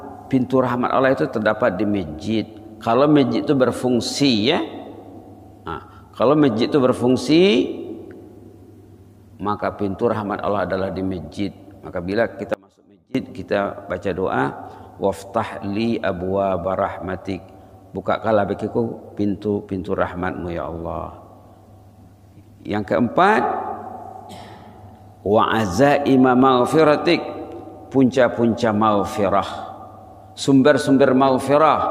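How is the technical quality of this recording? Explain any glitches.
There is one clear glitch, an audio dropout to a faint residue from 12.54 to 13.15 s. For about 0.61 s the sound abruptly falls to a faint leak roughly 25 dB below its normal level, then snaps back. The likely cause is a brief loss of the wanted signal while the path after the break stayed live. On a waveform it shows as a sharp-edged near-flat notch; on a spectrogram, a vertical band of dim energy with hard edges, not a fade.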